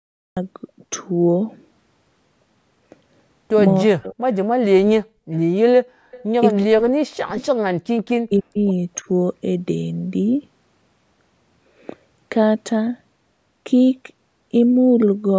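The speech bursts in abruptly from digital silence at 0.37 s, with no natural onset. This is a cut-off start: capture began after the talker was already mid-sound.

At 3.83 to 4.22 s and 4.65 to 5.09 s the voice sinks sharply, by around 40 dB, almost vanishing for moments. This is speech suppressed in double talk, most likely an echo canceller ducking everything while both sides spoke at once.

At 6.11 to 6.24 s a faint, delayed copy of the voice trails 278 ms behind, about 25 dB under the speech. That is an echo leak, likely loudspeaker pickup the far end's canceller failed to remove.

The same double-talk suppression returns at 6.61 to 7.43 s and 8.17 to 8.57 s, again gouging roughly 40 dB out of the voice. At 8.98 to 9.06 s there is a much shallower dip of about 10 dB.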